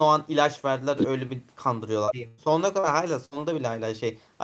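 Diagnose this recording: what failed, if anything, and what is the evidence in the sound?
Brief smears in the speech at 2.05–2.09 s and 2.80–2.85 s, each a momentary wobble. This is short concealed packet loss at the network stage: roughly 20 ms and 40 ms never reached the decoder, which extended the preceding sound and blended back in.

A held buzz or fading hiss replaces the speech at 2.27–2.40 s and again at 3.25–3.33 s, after which the talk resumes with about 100 ms and 60 ms missing. This is a burst of packet loss on the network. Consecutive packets went missing, so the decoder prolonged the last sound while turning it down.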